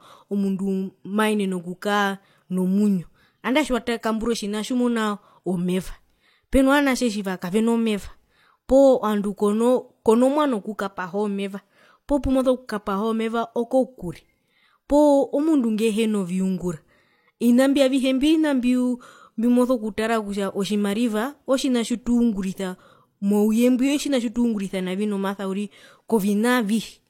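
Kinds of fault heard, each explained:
Transcoding between lossy codecs: the speech carries two different kinds of coding damage at once, likely from an MP3 pass at around 96 kbit/s followed by HE-AAC at around 32 kbit/s. Nothing sounds above 16.3 kHz, and the second codec's own artefacts sit on top of the first codec's own artefacts. That layered mix is what separates it from a single heavy compression pass, which would show only one codec's character.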